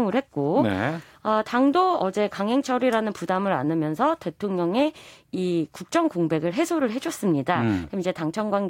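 Nothing in this recording stands out as a technical fault, so there's really nothing here to walk through moment by moment.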